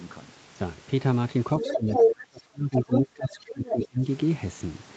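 From 1.6 s to 4.06 s the talker's speech is turned down in stretches adding up to about 2 s, dropping by as much as about 25 dB. This is speech suppressed in double talk: the echo canceller likely heard loudspeaker echo and this talker at once, and pulled both down. On a waveform the speech envelope sinks into dips; a spectrogram shows the harmonics thinning or breaking off in patches.

Inside that same stretch the other side's voice leaking through appears in five bursts: 1.6 to 1.76 s at about 5 dB under the talker, 1.93 to 2.08 s at about 5 dB above, 2.79 to 3.02 s and 3.65 to 3.86 s at about 5 dB under, and 3.32 to 3.36 s at about 25 dB under. Residual echo the canceller missed is the likely cause. On a spectrogram these show as short, separate harmonic patches that don't line up with the talker's own pitch tracks, with the room noise floor about 23 dB down.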